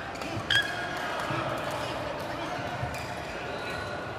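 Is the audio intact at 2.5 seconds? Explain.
Yes, the audio at 2.5 seconds is intact, with no dropout, click, distortion or other fault at that point.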